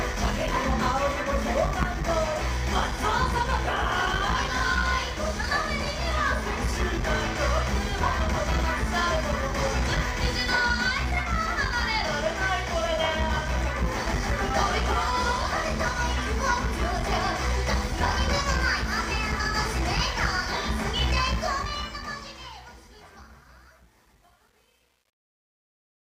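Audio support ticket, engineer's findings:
Truncation distortion on fade-out, 21.27 to 26.03 s, worst from 22.2 s. The fade starts around 21.3 s, and its tail turns gritty. The undithered fade or volume stage rounds samples to too few levels, consistent with a 9-bit word.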